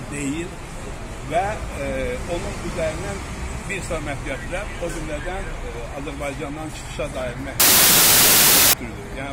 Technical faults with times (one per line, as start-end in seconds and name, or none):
7.60-8.73 samples built from the wrong bytes